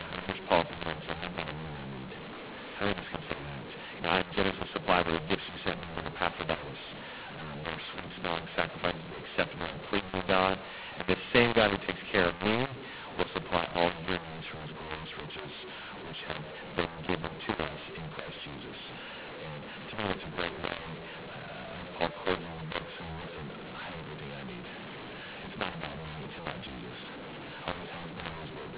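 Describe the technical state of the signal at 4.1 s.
At 4.1 s the speech carries a mu-law and A-law mix-up that runs through the whole recording: samples coded with the mu-law curve are being expanded with the A-law curve, so each 8-bit code maps to the wrong amplitude. Levels come out scrambled and the speech sounds harsh and gritty, and pauses fill with hiss. On a waveform the envelope looks jagged and the quiet gaps never settle to zero. A spectrogram shows broadband distortion smeared up to the 4 kHz ceiling of the 8 kHz-sampled telephone signal.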